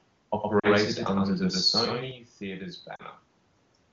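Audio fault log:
0.59–0.68 s and 2.96–3.02 s: lost AMR speech frames. Each event is a short smeared dip of about 40 ms, which fits two consecutive 20 ms frames failing their checksum. The AMR-WB decoder filled the gap by repeating the last good pitch and vocal-tract parameters at decaying gain, so the speech briefly sags toward near silence rather than clicking out. The sound recovers weak or rough for a moment before settling.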